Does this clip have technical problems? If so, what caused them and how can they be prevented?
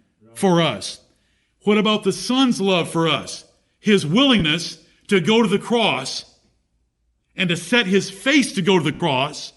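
Yes. Throughout the speech there is plainly audible Bluetooth LC3 compression: a breathy, grainy edge on sibilants and upper harmonics, with the top octave sounding rough. This is likely the transform codec thinning out the upper spectrum and filling it with noise, consistent with a bitrate around 48 kbps. On a spectrogram the high band looks speckled and diffuse rather than showing clean harmonic lines, with blocky structure at roughly 10 ms intervals. Sending at a higher LC3 bitrate, or recording with a wired microphone, would prevent it.

There are lost LE Audio frames at 4.39 to 4.42 s (about 20 ms) and at 8.94 to 9.00 s (about 60 ms), the second just after "to set his face". The decoder covers each gap by repeating the last spectrum with randomised phase, so the voice briefly turns into a noisy smear, and the longer gap starts to fade. On a spectrogram the harmonics give way to a uniform noisy patch, and the waveform shows a short stretch of shapeless, decaying energy. 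Keeping the devices close and reducing 2.4 GHz interference would prevent these dropouts.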